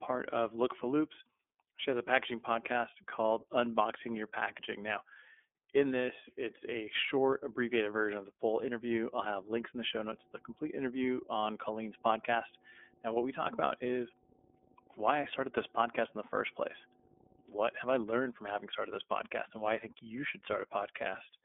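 Throughout, the speech is confined to about 250 Hz to 3.5 kHz and has a rough, synthetic edge. This is the iLBC codec's frame-by-frame coding, not simple band-limiting. From 10.04 to 18.04 s, between "links in the show" and "from having started this", a steady 50 Hz mains hum sits well under the speech. It is a fixed pitch, unlike broadband rumble.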